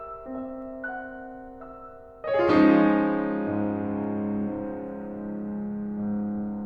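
A music clip with sample clock jitter from 4.15 to 5.65 s: the converter's clock wanders by a fraction of a microsecond, so steep, bright passages pick up a fine roughness roughly 55 dB down. Unlike steady background hiss, it follows the music's loudness and treble and disappears in quiet moments.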